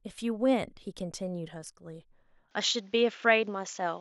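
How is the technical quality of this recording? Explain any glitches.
The recording has one glitch, which starts partway through and runs to the end. From 2.51 s the speech abruptly loses everything above 7.3 kHz and a faint new background hiss appears, with no gap and no change in level. This is likely an input switched to a poorer device. A simple filter or codec bandwidth drop would dull the sound in the same way, but it would not bring a different noise floor and tone with it.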